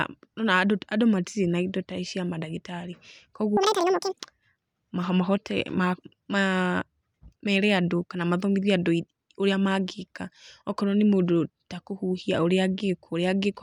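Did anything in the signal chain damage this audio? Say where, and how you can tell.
Yes. At the sample-format conversion stage, the audio was read two samples at a time (double speed) from 3.57 to 4.2 s. Pairs of samples were treated as single frames, so the speech runs twice as fast and an octave higher.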